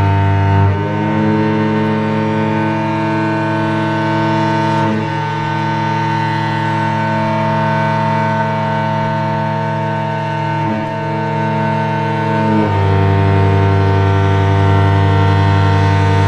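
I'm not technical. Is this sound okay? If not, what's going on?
Yes, it's fine: nothing in it cuts out, crackles, skips or sounds broken, so there's nothing to worry about.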